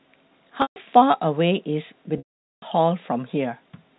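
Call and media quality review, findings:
Packet loss with pitch repetition, 0.62 to 0.76 s: brief buzzy hold, then a quiet gap, about 140 ms lost in all. The receiver's concealment loops the last pitch period and fades it over roughly 50 ms. Same fault at 2.18 to 2.62 s: 440 ms dropout, with a short buzz, a long silence and a cross-fade back in. Gap lengths fit 20 ms packets. Check the network path and jitter buffer. The G.711 telephone coding underneath just gives the usual 4 kHz ceiling.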